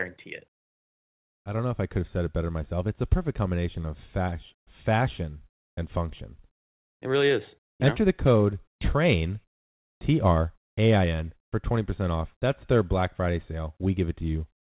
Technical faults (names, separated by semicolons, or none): none